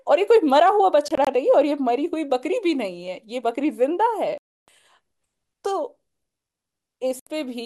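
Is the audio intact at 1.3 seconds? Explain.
Yes, just barely: a Bluetooth dropout runs from 1.08 to 1.27 s. Roughly 70 ms of speech vanishes in short silent gaps scattered over about 186 ms, the longest 23 ms, likely from about three wireless packets arriving late and being discarded. Sound resumes already advanced, intact by 1.3 s.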